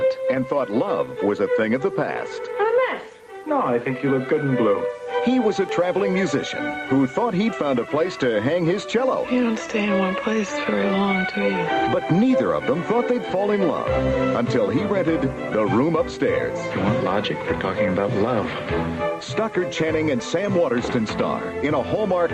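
The signal shows no technical faults; it carries the character of a WebRTC call path, with a top end reaching to around 12 kHz, which fits an Opus call link at a moderate bitrate.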